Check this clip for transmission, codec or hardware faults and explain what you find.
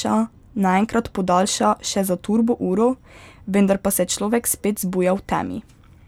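No transmission, codec or hardware faults can be heard anywhere in the speech, and the signal holds steady and continuous throughout.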